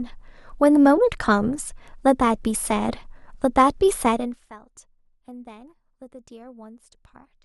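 No technical faults are audible in this speech.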